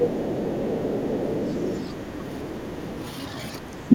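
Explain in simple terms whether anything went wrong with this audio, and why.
From the start to 3.1 s, the other side's voice is leaking through: a faint second voice sits well below the talker, likely because the echo canceller left some loudspeaker sound in the microphone. From 3.68 s to the end, the talker's speech is suppressed in double talk. It dips sharply for about a fifth of a second in all, likely because the echo canceller turned everything down while both sides spoke at once.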